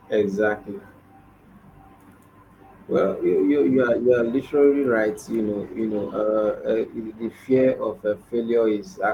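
Speech clip with a call bitrate drop from 5.38 s to 7.81 s. Across that span the voice turns coarser and rougher, with a watery, smeared texture, and holds that degraded quality for about 2.4 s before recovering near 7.8 s. The sound suggests the call's bandwidth estimate fell and the Opus encoder was throttled from roughly 32 kbps to 16 kbps, leaving fewer bits per frame and forcing cruder spectral coding until the rate came back up.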